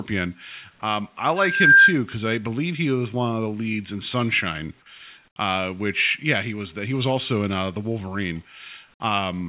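From 1.36 to 1.97 s, loudspeaker feedback squeal: a 1.6 kHz tone swells within about 0.4 s to far above the speech, drawing a bright horizontal spectrogram line.

From 5.28 to 5.36 s the background drops about 15 dB into smoother, featureless hiss, likely comfort noise in place of the background. The waveform floor steps down.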